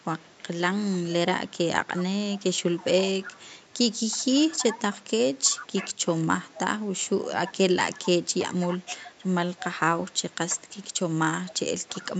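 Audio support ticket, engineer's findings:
Echo leak: delayed copy of the speech trailing about 330 ms behind, 0.23 to 10.93 s at about 15 dB down, then 11.47 s to end, fainter. Likely far-end speakerphone echo canceller letting residue through.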